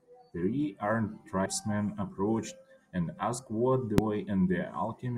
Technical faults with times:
1.42-1.46 damaged data in a compressed stream
3.98 damaged data in a compressed stream

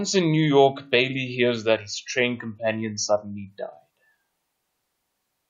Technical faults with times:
none

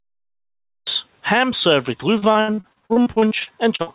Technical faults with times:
0.00-0.87 cut-off start
2.18-3.95 repeated packet loss (robotic sound)

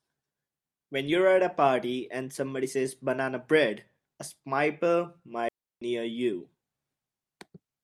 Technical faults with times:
5.48-5.81 digital wireless dropout

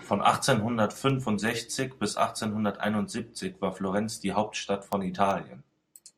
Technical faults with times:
0.33-6.07 word clock ticks

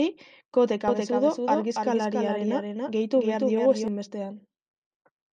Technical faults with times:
0.88-3.88 doubled audio track

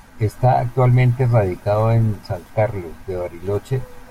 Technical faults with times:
none

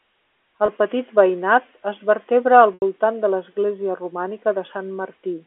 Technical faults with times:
0.66-0.68 packet loss with pitch repetition
2.74-2.82 packet loss with pitch repetition

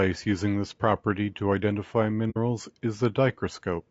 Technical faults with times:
0.00-3.90 low-delay AAC compression
2.30-2.38 AAC frame loss with muting

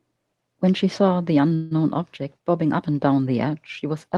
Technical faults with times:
1.55-1.74 call audio freeze

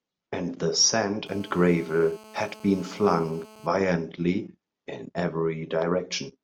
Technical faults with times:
1.26-3.67 GSM phone buzz

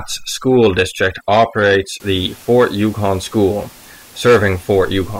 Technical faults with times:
0.00-2.00 overdone noise removal

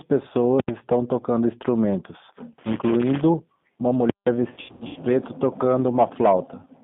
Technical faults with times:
0.00-6.83 G.729 codec
4.54-5.00 VoIP packet loss concealed by the speech codec

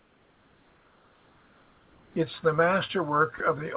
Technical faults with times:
0.00-2.16 comfort noise in place of the background
3.38-3.40 sound dropped by the voice detector

